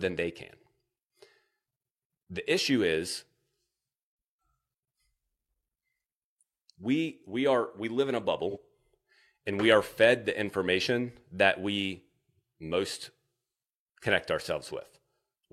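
At 8.50 to 8.57 s, right after "we live in a", there is an AAC frame loss with concealment. Instead of a clean gap, the decoder covers the missing stretch, about 43 ms, which fits a single lost frame, by reusing the last good spectrum. It sounds like a brief smeared, noisy, phasey patch. That filled-in texture distinguishes it from a plain dropout, which would fall to silence, and the loss is too short for any fade-out.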